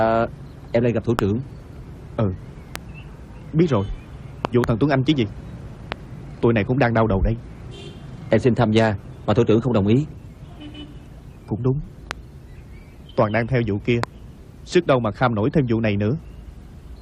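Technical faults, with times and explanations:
1.19, 2.76, 4.45–4.66, 5.92, 12.11 and 14.04 s: loud pop. Sharp pops (a double at 4.45–4.66 s) about 20 dB above the continuing sound, likely voltage pulses from a switch, plug, static or driver.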